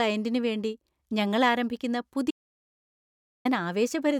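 An audio dropout to silence runs from 2.31 to 3.45 s, cutting the speech off mid-flow and bringing it back just as abruptly about 1.14 s later. The gap is dead digital silence, with no room tone or background hiss underneath, which points to silence being written rather than a quiet passage. The likely cause is a momentary loss of the input signal, such as a dropped link, a disconnected device or a brief mute. Whatever was spoken in that stretch is lost.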